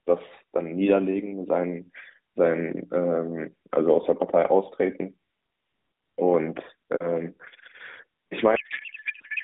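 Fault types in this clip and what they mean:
codec payload misread: The receiver unpacks octet-aligned AMR frames as if they were bandwidth-efficient, so every field lands in the wrong bits. From 8.56 s to the end at 9.44 s, the narrowband speech gives way to garbled noise and warble that barely tracks it.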